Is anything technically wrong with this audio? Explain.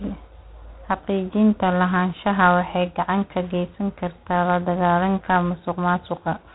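Yes. Throughout the speech there is a harsh, rasping hiss that rises and falls with the level of the talker, and nothing reaches above about 3.9 kHz. This is G.726 ADPCM at 24 kbit/s, where too few bits per sample for the prediction difference leave coarse quantisation noise tracking the signal, within a telephone-band ceiling.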